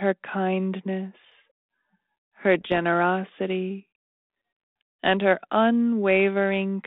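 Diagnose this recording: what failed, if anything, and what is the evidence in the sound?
Bit errors on an ADPCM link, 2.61 to 2.79 s: pops and rough bursts on the codec stage, as flipped bits derail the decoder's step size and predictor, roughly one bit in two hundred.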